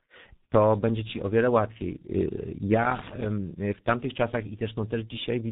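A speech recording marred throughout by tandem speech coding. It sounds rough, muffled and warbly, which fits two speech coders in a row, likely an ADPCM stage like G.726 followed by a low-rate G.723.1-type coder. Each re-encodes the previous one's degraded output. A spectrogram shows nothing above 3.8 kHz and smeared, blotchy harmonics. From 2.82 to 3.25 s comes loose connector crackle, an irregular burst of scratching from a contact rapidly making and breaking. The waveform shows this as chopped segments, and the spectrogram as ragged broadband vertical streaks.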